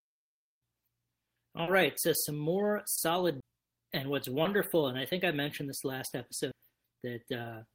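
At 1.63 to 1.69 s, just before "right so some more", short concealed packet loss fills a 40 ms hole with extrapolated sound, heard as a brief smear. A spectrogram shows frozen, smeared harmonics or shaped noise where real detail should be.

The same packet loss recurs at 2.95 to 2.99 s, right after "right so some more", at 4.43 to 4.47 s, just before "and I think I", and at 6.09 to 6.13 s, each patching about 20 ms.

At 3.40 to 3.43 s, a CD skip mutes for roughly 20 ms, then resumes elsewhere on the disc. The waveform shows a near-silent notch and an abrupt discontinuity, heard as a tick and jump.

At 6.52 s, a second CD skip leaves a mute of a few milliseconds, a tiny waveform break heard as a click.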